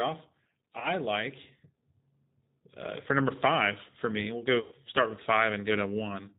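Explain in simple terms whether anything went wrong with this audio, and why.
The whole recording sounds slightly rough, muffled and robotic: that is the G.729 codec, a phone-call compressor that rebuilds speech from a simplified model and drops everything high-pitched. Around 0.79–0.93 s and 4.61–4.76 s the sound smears into a fading buzz or hiss. That is VoIP packet loss concealed by the speech codec, with the decoder guessing over missing pieces of the call.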